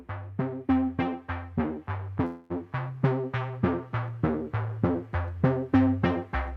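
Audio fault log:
2.25–2.52 s, call audio freeze: the last sound is held as a fading buzzy hiss for about 250 ms, never dropping to silence, then the audio resumes exactly where it stopped, now running about 246 ms later. Likely cause: delayed packets emptied the jitter buffer, so the receiver stretched the final sound until they arrived.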